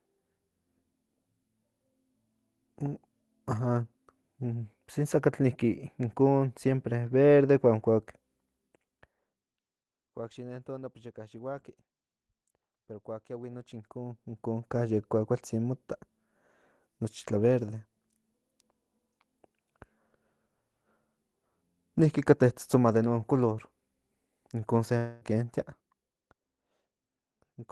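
At 24.97 s the stream likely suffered a long network dropout: roughly a quarter second of packets, through 25.24 s, never arrived, and the receiver of this Opus call, which carries the speech at about 12 kHz bandwidth, synthesised a replacement from the last sound it had. That concealment covers nearly the whole gap, about 240 ms, so instead of silence there is a smeared, buzzy continuation that thins out before the speech resumes with the lost portion simply missing.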